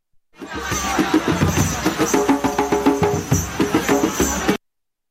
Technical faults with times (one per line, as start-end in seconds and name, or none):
none